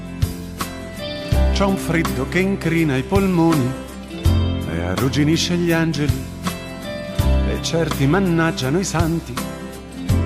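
Sharp single clicks at 1.95 s and 8.03 s are likely dropped samples, where a fraction of a millisecond goes missing and the waveform jumps abruptly.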